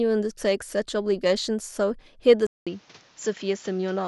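The input was likely switched to a poorer device at 2.47 s. After a 200 ms silence, the speech carries on through a narrower path with nothing above 7.4 kHz, so it sounds duller, with a new noise floor well below the speech and little change in level.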